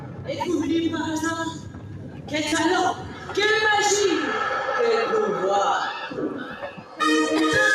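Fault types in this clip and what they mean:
Noise suppressor applied to music or sounds: A suppressor designed for speech stays active through the whole clip. It mistakes steady tones, ambience and decaying tails for noise and turns them down. Level swings of around 10 dB make the sound pump and thin out.
Sound cut by the noise suppressor: Here the suppressor pushed particular passages down harder. This happens at 0.00 to 0.44 s, 1.49 to 2.34 s, 2.94 to 3.35 s and 6.05 to 7.00 s. The others drop by about 9 dB, and the third by about 8 dB. Sustained parts sink while sharp onsets survive.
Repeated buffer: Fresh audio arrived late, so the playback device replayed its last block. Between 2.48 and 2.52 s one tiny slice sounds several times over, with hard joins. The repeats run quickly, which fits a 10 ms buffer. They come across as a brief buzz or stutter.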